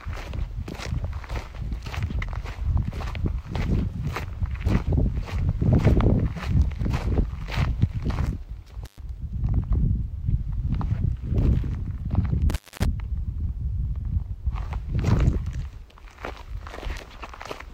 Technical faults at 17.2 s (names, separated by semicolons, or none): none